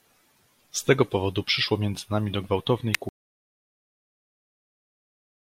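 At 2.95 s a sharp snap sits on top of the speech, lasting only a few milliseconds. This is an electrical switching spike: a brief arc, most likely from a nearby switch, relay, motor or static discharge, coupled into the audio line and was recorded as a fast transient. It is added to the signal rather than replacing it, so the speech continues underneath the click without interruption.

From 3.09 s the audio drops out to silence and stays there until the end of the clip, about 2.5 s later. The speech stops abruptly mid-flow, and what follows is silence with no room tone left. That points to the input signal being lost, likely through a disconnected device, a failed link or an unintended mute, while recording carried on writing silence. Anything spoken after that point is not captured.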